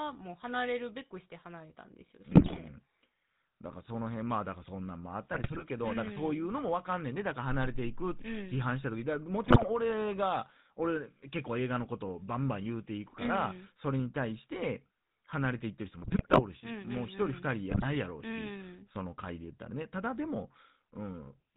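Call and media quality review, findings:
GSM full-rate codec, throughout. Buzzy, gravelly speech, nothing above 4 kHz. A pulse-driven vocal-tract model with sparse excitation, consistent with a 13 kbps stream.

GSM bit errors at 2.3–2.59, 5.33–5.64, 9.44–9.7, 16.0–16.42 and 17.7–17.87 s. Squawks, pops and gargling. Flipped bits corrupt filter, pitch and gain values, distorting frames.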